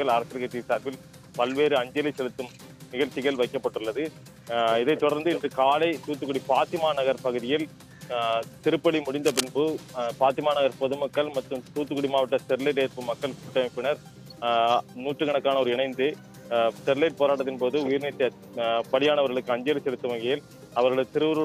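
At about 9.16 s there's a burst of cable scratch noise, lasting until roughly 9.53 s: a dense, ragged rustle sitting only a few dB under the sound. It's likely a worn lead or connector being moved, its contact flickering rapidly.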